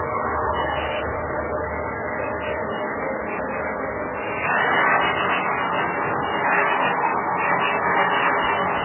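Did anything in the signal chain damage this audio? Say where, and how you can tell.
Yes, the codec stage, throughout. Nothing survives above 3 kHz, and the remaining sound is heavily watery and swirly with smeared attacks. On a spectrogram there's a flat ceiling at 3 kHz and flickering holes below it. This is likely MP3 compression at a very low bitrate, around 8 kbps.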